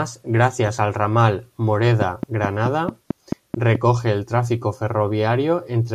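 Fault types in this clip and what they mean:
Train of clicks: a steady ticking of about ten sharp, similar pulses at 4.6 per second from 2.02 to 3.76 s, standing well above the speech, roughly 15 dB louder. The evenly spaced pulses likely come from electrical interference or a faulty connection or power supply.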